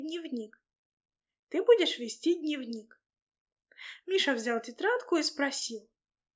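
No dropouts, clicks, level jumps or other transport or processing faults can be heard anywhere in the audio.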